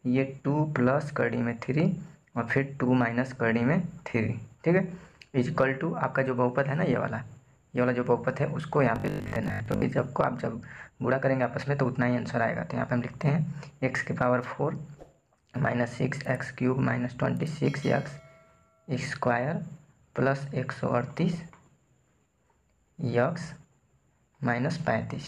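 From 8.96 to 9.88 s the sound turns into a rigid, metallic buzz at 50 Hz: robotic sound from repeated short buffers. Audio is likely arriving too seldom, so a 20 ms chunk is replayed to fill the gaps, with about half the real material skipped.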